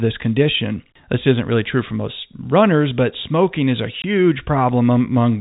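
Speech over a G.711 telephone path with nothing above 4 kHz. There is one packet loss filled with silence from 4.02 to 4.04 s, just after "but smoking is a": a 20 ms hole where the receiver substituted silence for missing audio, which fits a single lost packet.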